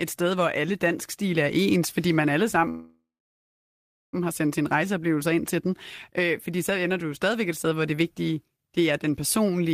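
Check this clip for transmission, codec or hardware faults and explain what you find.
One fault is audible: a call audio freeze from 2.69 to 4.15 s, just after "ens fordi man alle" and before "har sendt sin". The speech stalls, the last sound trails off as a fading buzz, and about 1.1 s of the roughly 1.4 s gap is silence. The likely cause is delayed packets draining the jitter buffer. Unlike a packet-loss dropout, nothing is cut out: the speech resumes exactly where it stopped, only 1.4 s later.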